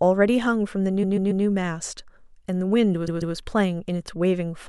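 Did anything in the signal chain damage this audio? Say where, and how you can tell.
Yes, repeated frames at the codec or storage stage: a 0.14 s block replays three extra times from 1.02 to 1.44 s, then twice from 3.07 to 3.35 s. Unlike a buffer dropout, nothing is lost; the audio is stretched by duplicated compressed frames.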